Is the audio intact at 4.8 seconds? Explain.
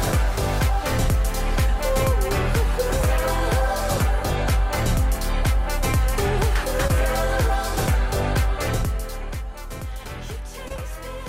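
Yes, the audio is intact at 4.8 seconds, with nothing there interrupting or damaging the sound.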